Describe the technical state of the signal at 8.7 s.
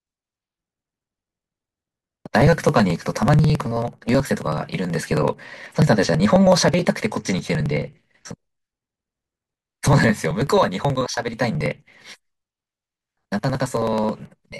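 At 8.7 s the speech is hit by periodic USB or driver dropouts, running from 0.1 s to 14.5 s. Every 54 ms, around 10 ms of audio is skipped. Something is stalling the audio path. This gives a steady, rapid ticking under the speech.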